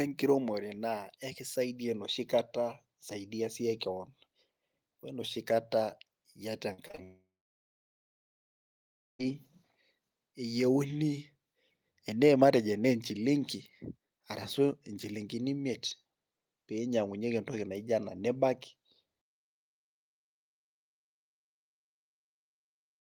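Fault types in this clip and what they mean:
Repeated packet loss (robotic sound): Brief holes open again and again, and each one is papered over by stretching the last bit of sound, giving a choppy texture. From 6.73 to 6.99 s there are four such gaps, the longest 44 ms, together about 0.1 s, so roughly 38% of that quarter-second is synthetic fill. Unlike a long dropout, the sound keeps returning between the gaps rather than falling silent.
Long network dropout: From 7.03 to 9.35 s the sound stops arriving for about 2.16 s. The end of the last sound is extended as a short fading buzz or hiss, then about 1.93 s of silence follows before the audio resumes, with the missing stretch simply gone. This is likely the network stopping delivery altogether. It differs from the robotic packet loss just before it: one continuous gap that decays into silence rather than many tiny patched holes.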